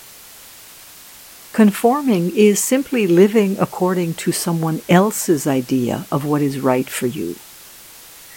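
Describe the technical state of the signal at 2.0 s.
At 2.0 s, as across the whole clip, the speech suffers from low bit depth with dither: it is stored with only 7 bits, and noise was added before rounding. The rounding error becomes a steady, even hiss around 25 dB below the speech, with no distortion.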